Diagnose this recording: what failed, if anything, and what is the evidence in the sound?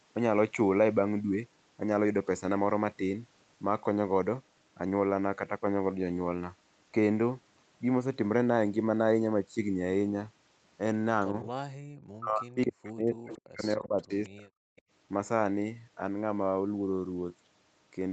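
Echo leak at 11.22–11.26, 13.32–13.38, 14.02–14.29 and 14.76–14.82 s. Each time, a delayed copy of the far-end speech appears 272 ms after the original. It sits about 35 dB below the speech in the first and last bursts, about 30 dB below at 14.02 s and only about 15 dB below at 13.32 s. This was likely call processing at a loudspeaker end: the echo canceller failed to cancel fully, and the residue was transmitted back.

Background gated by the echo canceller, 11.76–11.84 s. The room sound abruptly dips, at its deepest by about 40 dB, for about 70 ms, then recovers. This happens in the call processing stage. While the loudspeaker was active, the canceller's suppressor clamped the microphone gain to hide possible echo, and it released once it judged the loudspeaker signal gone. The sudden hole in the ambience is the audible sign of that gating.

Speech suppressed in double talk, 12.12–14.1 s and 14.29–14.53 s. 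The near talker's speech thins and drops away in pieces by up to about 40 dB, roughly 1.5 s in total across the first stretch and about 0.2 s in the second. This likely comes from the echo canceller during overlapping talk. It could not separate the local voice from the loudspeaker echo and attenuated both. The echo bursts at 13.32 and 14.02 s fall inside these stretches, consistent with the canceller struggling there.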